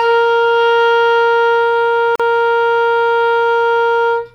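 At 2.16 s the music falls into a 41 ms silence with smeared edges, a gap at a join of encoded pieces where encoder delay and padding were never trimmed.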